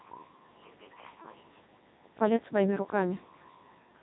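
Throughout, the speech carries Codec 2 vocoder damage: rebuilt from pitch and envelope as sine waves, it sounds heavily robotic and buzzy, nothing above 3.8 kHz, which fits the 3.2 kbit/s mode.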